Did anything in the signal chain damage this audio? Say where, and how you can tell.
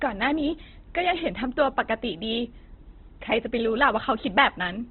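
Yes, at the codec stage, throughout the speech: likely Opus compression starved of bits. Nothing survives above 4.2 kHz, and the thin bands are filled by folding or noise, leaving a rough, grainy, narrowband sound that fits its CELT mode near 12 kbps.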